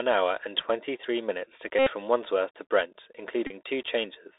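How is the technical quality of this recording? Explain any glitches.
The recording is poor, narrowband and coarse throughout, with two buzzing glitches.

Throughout, the Bluetooth CVSD headset codec's one-bit slope tracking leaves s sounds scratchy and a granular hiss; a spectrogram shows nothing above about 3.7 kHz.

At 1.79–1.91 s, just after "minutes to", and at 3.47–3.52 s, a Bluetooth headset packet is repeated: lost packets are replaced by the previous one, buzzing near 267 Hz and showing as a regular repeating waveform.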